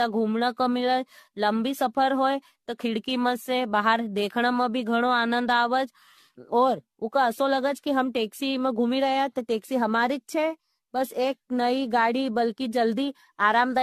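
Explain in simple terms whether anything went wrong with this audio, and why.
Something did go wrong, and it lasts the whole recording: the speech sounds swirly, hollow and smeared, with the starts of sounds blurred, and nothing is heard above about 14.1 kHz. This is generation loss, likely from the audio being squeezed with the AAC format and unpacked again roughly seven times. Each round adds its own small damage, and it piles up. A single rough squeeze would sound dull but steadier. Here the swirling and hollowness are stronger than that would explain.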